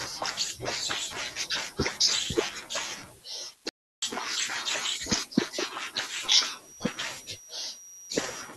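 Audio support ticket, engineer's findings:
Audio dropout to silence, 3.69–4.02 s: speech cuts to silence for about 0.33 s, with no room tone. Likely input link loss or a momentary mute while the recorder kept writing silence.

Feedback whistle, 6.57 s to end: a thin, steady 5.8 kHz tone, swelling and fading slowly, sits roughly 20 dB under the speech. Likely a speaker-to-mic loop held just short of runaway.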